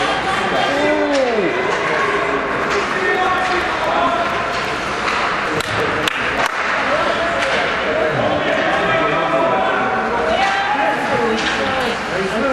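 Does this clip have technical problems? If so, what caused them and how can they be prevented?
Yes. Periodic USB or driver dropouts tick from 3.15 to 6.38 s, every 0.115 s. Each skips about 10 ms of audio, roughly thirty times. Stopping background tasks that stall the USB bus or audio driver prevents this.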